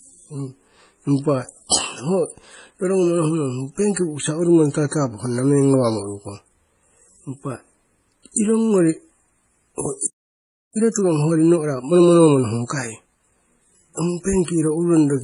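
From the start, the speech carries two layers of coding damage at once. There are smeared, swirling highs and a metallic sheen in the upper band, typical of spectral band replication, together with pre-echo and a watery smear on consonants. Nothing sits above about 11.1 kHz. This is likely transcoding between lossy codecs, and fits a low-rate MP3 re-encoded to HE-AAC. On a spectrogram the top edge is a hard shelf with patchy, copied-looking texture just beneath it.

At 10.06 s the audio cuts off mid-flow and stays silent until 10.76 s, a gap of about 0.68 s. This playback stall likely came from the player running short of data or having its output thread blocked. The waveform shows a flat line. On a spectrogram it appears as a clean vertical blank band across all frequencies.

From 10.76 s to 13.48 s the speech runs at 1.25 times normal speed with its pitch unchanged. This time-compressed catch-up comes from the player trimming its backlog by cutting out short slices and cross-fading the remainder together. 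The result sounds hurried. On a spectrogram, syllables and pauses appear packed closer together while harmonic spacing stays the same. The waveform shows shortened gaps between bursts.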